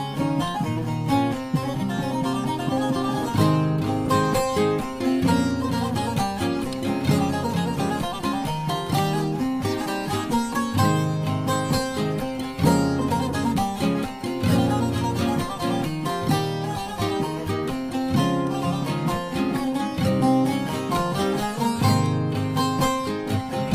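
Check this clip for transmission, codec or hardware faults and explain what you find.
No faults found on listening; nothing in the audio points to a problem in the signal path.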